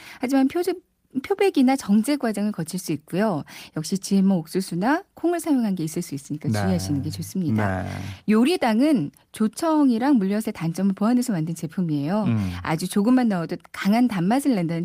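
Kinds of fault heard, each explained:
No technical faults can be heard in this recording.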